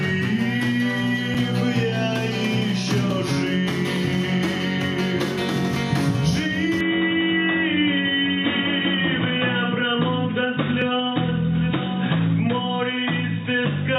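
At 1.34 s a block of digital silence about 5.3 ms long drops into the sound. The output falls straight to silence and returns with no fade, and the whole event is heard as a brief tick. The length fits a 256-sample buffer that was not filled in time. At 3.11 s a shorter block of about 1.3 ms, consistent with a 64-sample buffer, gives another tick.

From 6.81 s to the end the tone changes abruptly. Nothing remains above 3.8 kHz, so the sound turns dull and boxy, and a new background noise sits roughly 35 dB below the signal. There is no gap at the changeover and no noticeable jump in level. The likely cause is the input switched to a poorer device, such as another microphone or a headset in call mode. Within this narrowed section, at 10.82 s, a third 1.3 ms block of digital silence, again pointing to a 64-sample buffer, adds one more short tick.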